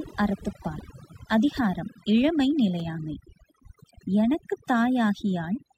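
From start to finish the speech shows overdone noise removal: an over-aggressive noise reducer has cut individual frequency bands near its noise estimate, taking quiet speech detail too. The background drops but twinkles. A spectrogram shows scattered isolated specks against blank gaps.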